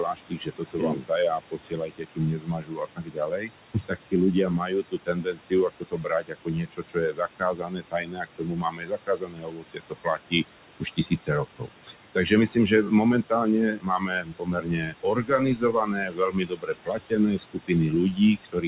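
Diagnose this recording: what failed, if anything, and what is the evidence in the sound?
Noise suppressor artifacts run throughout the clip, in the call processing stage. The room noise, about 13 dB below the speech, drops by about 22 dB between phrases and swells back under them. The suppressor estimates steady noise in each frequency band and turns those bands down frame by frame.

Speech cut by the noise suppressor occurs at 0–3.52 s, 3.74–4.14 s, 4.31–10.44 s, 10.8–11.96 s, 12.15–12.32 s, 12.54–12.92 s, 13.23–13.48 s, and from 13.67 s to the end. Soft consonants and word endings sound swallowed, dropping by up to about 22 dB, and by only about 9 to 11 dB in the brief dips between 12.15 and 13.48 s. The suppressor mistakes quiet speech energy for noise and attenuates it along with the background. All of this sits within narrowband G.711 call audio with nothing above 4 kHz.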